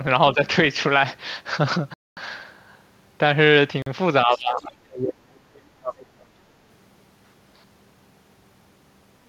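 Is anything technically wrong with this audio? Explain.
Yes, there are three kinds of fault in this speech, and they cluster in the first seven seconds.

Speech suppressed in double talk shows up twice. From 0.34 to 0.40 s there's a slight dip, only a few dB. From 4.25 to 6.34 s the talker drops hard, by something like 30 dB. Both sides were likely talking at once, and the echo canceller, unable to separate near voice from loudspeaker echo, pulled everything down.

There are two Bluetooth stalls, at 1.94 to 2.17 s (a 230 ms hole) and at 3.82 to 3.86 s (42 ms). The audio cuts to dead silence, then resumes. That's likely interference delaying packets until the headphone buffer ran empty.

The other side's voice leaks through in two brief scraps, at 4.33 to 4.40 s and 4.56 to 4.63 s, both inside that suppressed stretch. They're faint, roughly 20 to 30 dB under the speech level. Likely the echo canceller didn't fully scrub the loudspeaker playback from the mic.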